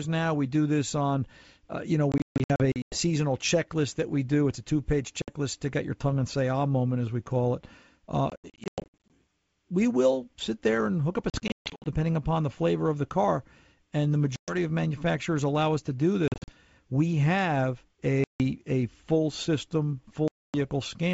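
Packet loss on an ADPCM call breaks up this G.722 wideband speech at 2.12–2.97, 5.22–5.29, 8.30–9.10, 11.30–11.87, 14.36–14.55, 16.28–16.51, 18.24–18.42 and 20.28–20.57 s. Lost packets become hard-edged silent gaps, scattered in the longer stretches. The decoder's adaptive predictor and step size then disagree with the sender's, so speech returns distorted until they resynchronise.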